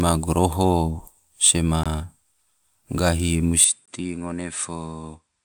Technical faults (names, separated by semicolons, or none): gap between chunks; input switched to a poorer device